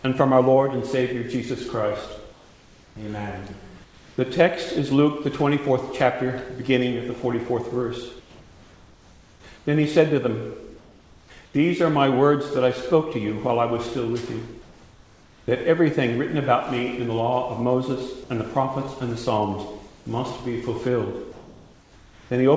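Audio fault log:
8.2–9.44 s, 9.58–9.66 s, 10.78–11.3 s, 11.46–11.54 s, 14.62–15.48 s, 19.88–20.06 s, 21.32–22.3 s: comfort noise in place of the background. In each pause, lasting 80 ms to 1.24 s, the real background is replaced by steady, featureless hiss. That hiss sits about 28 to 31 dB below the loud passages and is at most about 2 dB quieter than the true background. The likely cause is discontinuous transmission, with the receiver synthesising noise until sound resumes.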